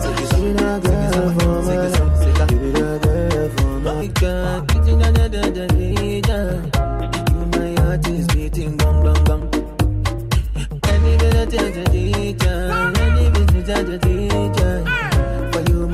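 The audio has two kinds of fault. At 4.01 to 4.03 s there is a skip ahead. About one and a half seconds of sound is missing. Playback jumps forward and the two sides are joined directly, with no fill. Audio was dropped while later audio already waited. Jitter buffer speed-up follows in three stretches: 4.64 to 6.79 s at 107% speed, 7.32 to 7.76 s at 108%, and 8.26 to 11.25 s at 109%. Pitch stays the same but the sound runs hurried. The receiver cut short pitch-period pieces, about half a second in total, to shrink an overfull buffer.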